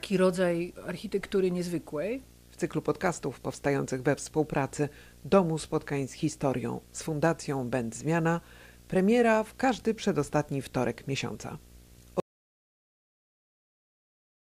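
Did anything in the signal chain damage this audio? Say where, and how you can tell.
Yes. A video or display buzz runs through the whole recording, picked up in the analogue wiring. The buzz sits at 59.94 Hz, the NTSC field rate, with hash above it and a whine at 15.7 kHz, the line-scan rate. The level is roughly 25 dB under the speech. A screen or video cable couples into the audio lines and causes it. Mains hum would sit at exactly 60 Hz with plain harmonics, and it would have no line-rate tone.

An audio dropout to silence begins at 12.2 s and lasts to the end of the clip. The speech stops mid-flow and the rest is silent. No room tone or noise floor remains, and even the display buzz is gone. That points upstream of the recorder, most likely a lost input or a disconnected device while writing continued. A noise gate or fade would leave some residue or taper, but this cut is abrupt and total.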